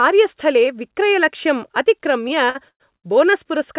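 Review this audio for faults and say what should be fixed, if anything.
Repeated stalls (stutter), 2.28 to 3.06 s: late packets emptied the jitter buffer five times, and the receiver stretched earlier sound across 274 ms, longest gap 112 ms. Allowing the jitter buffer more depth, or reducing delay variation on the network link, would prevent these stalls.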